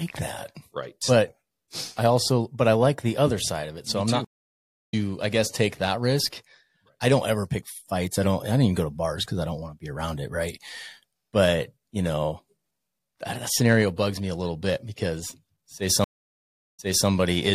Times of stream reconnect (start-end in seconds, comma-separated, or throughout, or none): 4.25-4.94, 16.04-17.08